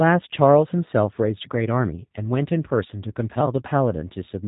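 G.729 codec damage runs through the whole recording, from the first sound to the last. The speech has been rebuilt from a model of the vocal tract, a pitch predictor and a handful of pulses per short frame, rather than carried as a waveform, which fits a low-rate voice codec of around 8 kbit/s. The result is plainly audible: speech stays intelligible but sounds rough and slightly synthetic, and nothing above about 3.8 kHz survives, leaving it muffled and narrow.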